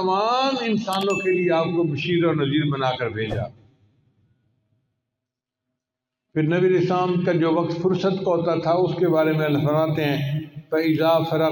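The audio carries crude rate conversion from 9.03 s to the end at 11.52 s. A gritty, inharmonic fizz sits around 30 dB below the signal and rises with loud, high content, which fits a 32 kHz to 48 kHz conversion by repeating samples. Steady hiss would stay constant instead.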